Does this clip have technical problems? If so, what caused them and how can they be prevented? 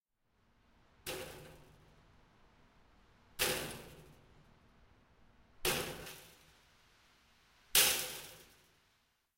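Yes. From 6.06 s to the end, pre-emphasis was left on. The treble boost, fitting a J.17 curve, was never undone, leaving 10 kHz about 11 dB above 1 kHz. A spectrogram shows the upper bands suddenly brighter. Applying the matching de-emphasis at playback or capture prevents it.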